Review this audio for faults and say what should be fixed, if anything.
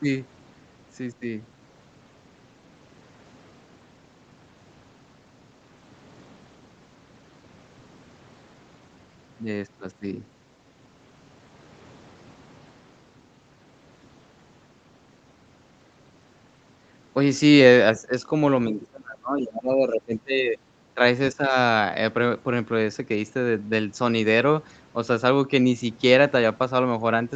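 The speech dips in level during four stretches: briefly at 17.97–18.12 s, then heavily for about two seconds at 18.69–20.59 s, and again at 20.94–21.01 s and 21.33–21.56 s. The short dips are about 10 dB, and the long one goes as deep as about 25 dB. This is likely speech suppressed in double talk, where the echo canceller heard both ends talking at once and turned the talker down along with the echo. To prevent it, use an echo canceller with stronger double-talk detection, or headsets that keep the far end out of the microphone.

A faint scrap of the other side's voice leaks through at 18.81–18.86 s, well below the talker at about 25 dB down, inside the long suppressed stretch. The likely cause is loudspeaker playback reaching the microphone, with the echo canceller leaving a residue it didn't remove. To prevent it, lower the loudspeaker volume, move the microphone away from the speaker, or switch to a headset.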